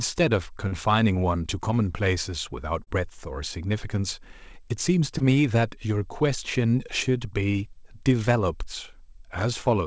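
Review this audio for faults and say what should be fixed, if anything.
Short concealed packet loss occurs at 0.68, 2.84 and 5.18 s. Each time about 30 ms of audio arrived too late, and the receiver extended the preceding sound before blending back, leaving a brief smear or wobble. On a spectrogram the harmonics briefly freeze and blur, and the waveform shows repeated, fading cycles. Forward error correction or a deeper jitter buffer on the G.722 link would prevent it.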